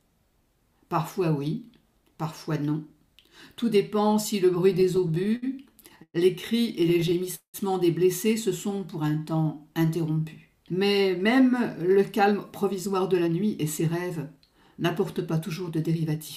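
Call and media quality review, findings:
Repeated stalls (stutter), 4.73 to 5.44 s. Nine short hitches, longest 66 ms. Jitter buffer ran dry. Receiver extended the last sound to bridge late packets. About 19% of the span filled this way. Nothing lost, but the flow catches.

Repeated stalls, 5.80 to 6.16 s. Four gaps, one of 112 ms. Same buffer underrun. Concealment covers 38% of the span. Audible drag and fade on the long hold.

Repeated stalls, 6.84 to 7.56 s. Seven gaps, longest 189 ms. Faded continuation on the longest one. About 34% concealed. Worst stutter of the three.

Jitter buffer slow-down, 8.68 to 10.21 s. Audio plays at 90% speed, pitch unchanged. Receiver repeated single pitch periods to rebuild its reserve, adding 165 ms. Sounds drawn out, slightly sluggish. Follows the stalls, consistent with a raised target delay.

Jitter buffer speed-up, 11.90 to 16.17 s. Audio runs at 107% speed, same pitch. 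Buffer over target. Receiver trimmed short pitch-period pieces, around 0.3 s in total. Audio sounds hurried across the whole stretch.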